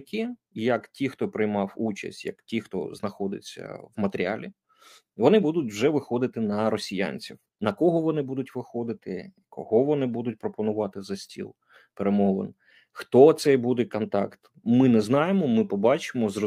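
Nothing in this audio stands out as a technical problem at any point; it's just the sound, with no glitches to flag.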